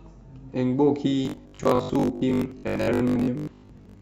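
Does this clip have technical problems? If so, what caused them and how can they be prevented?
Yes. From 1.26 s to the end, the speech turns into a stiff, metallic buzz at 50 Hz: robotic sound from repeated short buffers. New audio likely arrived too slowly, so roughly half the time a 20 ms chunk was replayed instead. A larger jitter buffer or a less loaded audio thread should prevent it.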